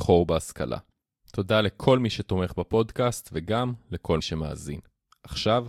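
Speech clip with one glitch: at about 4.19 s it jumps ahead, and you lose roughly 70 ms of audio. That's compressed frames skipped. A few consecutive frames, about four judging by the gap, never got played, either missing from the file or rejected by the decoder as damaged.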